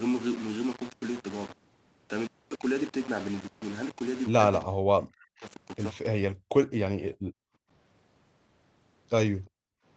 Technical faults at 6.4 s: low bit depth without dither; background gated by the echo canceller

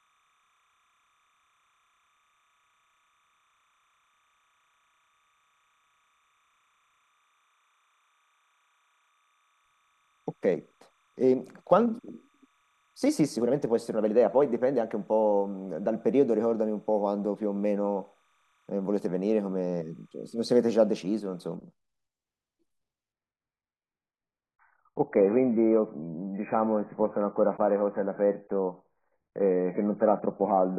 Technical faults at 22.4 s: none

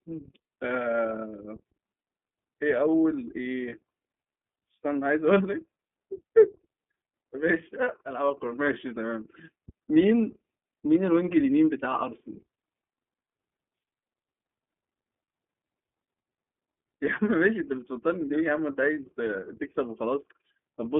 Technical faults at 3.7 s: iLBC codec; lost iLBC frames

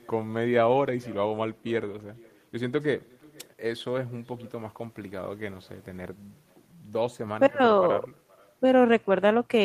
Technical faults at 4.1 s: echo with no canceller

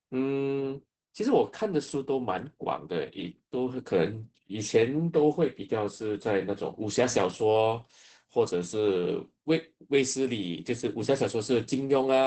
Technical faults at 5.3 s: Opus voice compression

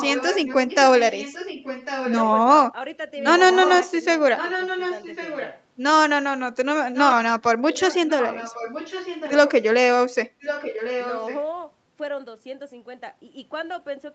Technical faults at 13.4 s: none

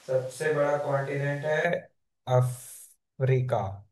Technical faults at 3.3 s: none

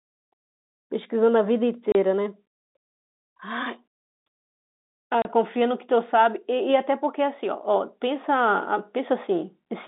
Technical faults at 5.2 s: packet loss filled with silence

